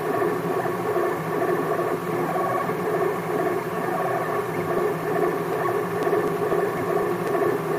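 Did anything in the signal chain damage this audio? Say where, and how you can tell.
Yes. From 4.78 s to 7.52 s, regular ticks sit on the sound every 0.25 s, about ten in all, each a tiny skip of roughly a millisecond. These are periodic USB or driver dropouts: something stalls the USB bus or audio driver at a fixed interval, discarding a sliver of samples.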